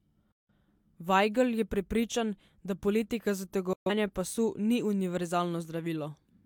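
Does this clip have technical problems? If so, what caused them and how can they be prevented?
Yes, two digital broadcast dropouts. The receiver lost good frames and muted, so this speech cuts off with a fade of about 3 ms at 0.32–0.51 s and 3.73–3.91 s, and that audio is gone. Better reception or stronger error protection prevents this.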